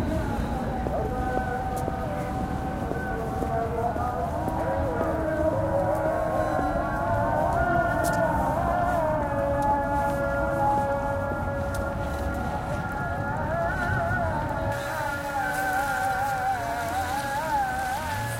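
From 14.72 s to the end of the clip, the sound shows pre-emphasis left on. A treble boost was applied without the matching de-emphasis, lifting 10 kHz by about 11 dB relative to 1 kHz, which fits a J.17 curve. The sound turns thin, bright and sibilant.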